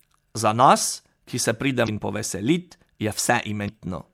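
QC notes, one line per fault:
1.84–1.89 s, damaged data in a compressed stream: right after "ki se", corrupted bytes make the decoder misread frames and lose sync, giving a brief 44 ms blip.
3.65–3.69 s, damaged data in a compressed stream: another 44 ms blip where the decoder misreads bad frame data and resynchronises at the next valid header.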